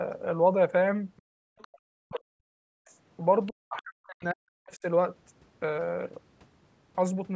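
Other side's voice leaking through appears first at 1.17 to 1.22 s as a faint second voice, far below the talker. It is likely echo from the device's loudspeaker that the echo canceller failed to remove from the microphone. The same residue recurs at 1.58 to 1.79, 2.12 to 2.2, 2.85 to 2.9 and 3.46 to 3.52 s, sitting roughly 25 to 40 dB under the speech.

Background gated by the echo canceller follows at 1.22 to 1.57 s. While the loudspeaker played, the canceller clamped the microphone, so the room sound drops by about 40 dB for roughly 0.4 s before recovering once the gate releases.

Speech suppressed in double talk occurs at 1.85 to 2.7 s and again at 3.49 to 4.85 s. The talker's voice dips by around 40 dB, likely because both sides spoke at once and the canceller could not separate the talker from the echo, so it attenuated both. The call's microphone processing leaves nothing above 8 kHz.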